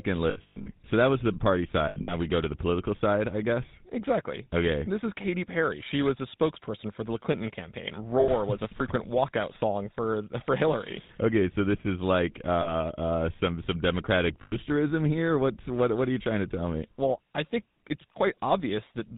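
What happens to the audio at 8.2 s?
At 8.2 s the GSM full-rate decoder hits a burst of lost GSM frames lasting until 8.29 s, just before "was a frequent". For those 80 ms, which fits four missing 20 ms frames, the decoder reuses the last good frame's parameters, so the sound freezes into a brief rough, metallic ring.

This sits on top of the GSM full-rate codec damage present throughout, consistent with its 13 kbps coding. Modelling the vocal tract with a sparse regular pulse excitation and cutting everything above 4 kHz leaves the speech plainly buzzy and gravelly.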